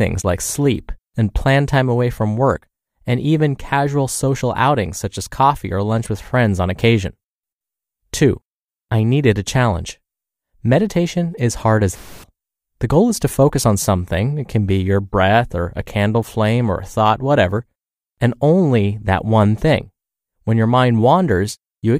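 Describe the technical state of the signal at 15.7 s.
At 15.7 s the signal is intact, with no audible fault in the speech at that point.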